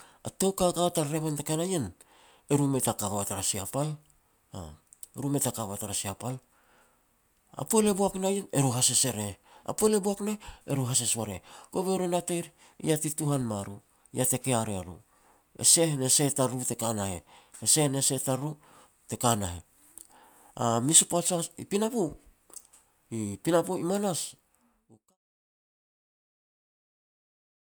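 Speech recording with no technical faults to report.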